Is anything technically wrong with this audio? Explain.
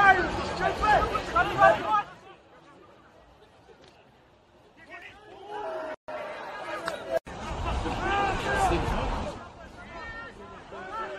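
Yes. From 1.67 to 2.28 s there is zipper noise. The level falls by about 20 dB in hard 2 dB steps, roughly twenty per second, with no smoothing between them. Each step makes a tiny click, so the fade ticks audibly instead of gliding smoothly. On a waveform the envelope descends as a staircase. A spectrogram shows faint vertical broadband lines at each step.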